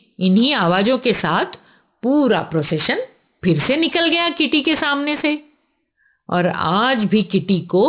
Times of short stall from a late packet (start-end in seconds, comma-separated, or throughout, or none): none